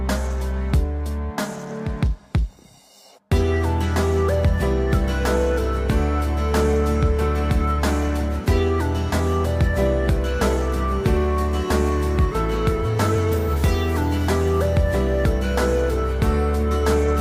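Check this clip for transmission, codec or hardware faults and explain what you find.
Nothing stood out on listening to the clip.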